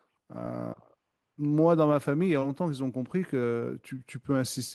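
At 2.39 s to 2.43 s there is short concealed packet loss. About 20 ms of speech arrived too late, and the receiver filled the gap by extending the preceding sound. It is heard as a brief smear.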